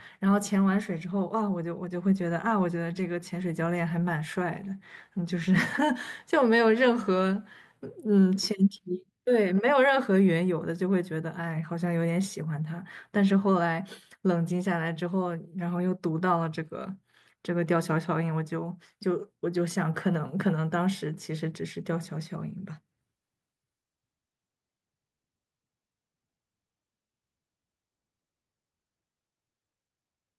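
No technical faults can be heard anywhere in the speech. Nothing in the audio calls for a timestamp or a note on its signal path.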